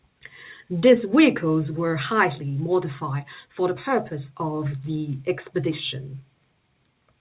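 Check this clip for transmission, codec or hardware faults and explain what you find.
No transmission, codec or hardware faults turn up in the clip.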